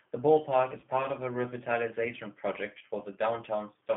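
Throughout, the speech carries the G.729 codec's sound: a narrow 200 Hz to 3.4 kHz band, with a rough, slightly synthetic texture from rebuilding each frame out of a filter, a pitch predictor and a few pulses. That model-based graininess, consistent with an 8 kbit/s coder, sets it apart from plain band-limiting.

At 0.80 to 0.85 s and again at 2.79 to 2.83 s, VoIP packet loss concealed by the speech codec briefly smears the speech into a buzzy tone or coloured noise that fades, which fits a single lost 20 ms packet each time. Unlike a dropout or a click, the gap is filled with extrapolated sound, and the speech stays weakened for a moment afterwards.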